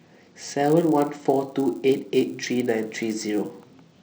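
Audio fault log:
Throughout: resampler restarted on every block. The speech carries a steady 100 Hz buzz riding under the signal, which drops out in the gaps between phrases. The sample-rate conversion from 16 kHz to 48 kHz was run on each 10 ms block separately, so the filter at every block edge worked with wrong neighbouring samples. That leaves a small error every 10 ms, and at that spacing the individual ticks fuse into a buzz.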